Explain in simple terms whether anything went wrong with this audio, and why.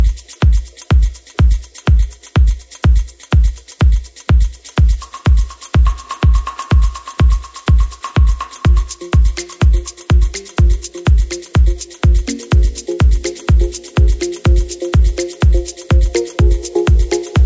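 Nothing went wrong here: the recording holds steady the whole way, with no breaks, jumps or damage to the sound that a listener would notice.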